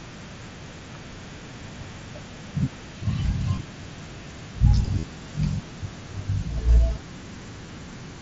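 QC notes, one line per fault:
3.56 s, 4.99–5.04 s and 7.66 s: concealed Bluetooth headset packet loss. At 3.56 and 7.66 s two packets each are lost, about 15 ms. At 4.99–5.04 s a short buzzy tone holds at full level for about 45 ms, then warbles slightly as real sound resumes. Packets from the headset went missing, and the phone filled each gap by repeating the best-matching recent stretch of waveform over the 16 kHz mSBC link.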